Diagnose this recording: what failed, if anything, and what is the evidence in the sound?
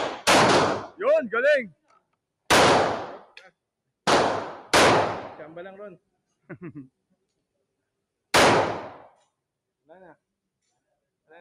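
Call processing: a noise suppressor applied to music or sounds keeps treating sustained content as noise, pumping level by roughly 5 dB; the waveform envelope breathes unevenly.

Sound cut by the noise suppressor at 0.82–1.01 s and 1.68–2.15 s, dropping about 19 dB and 22 dB; spectrograms show sustained energy abruptly hollowed out.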